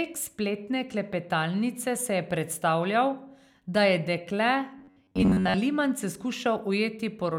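From 4.78 to 5.55 s the speech collapses into a rigid, metallic buzz pitched near 94 Hz, following the words only loosely. This robotic sound from repeated short buffers likely comes from audio arriving too seldom, so a slice about 11 ms long is looped over most of that stretch while the real signal is skipped.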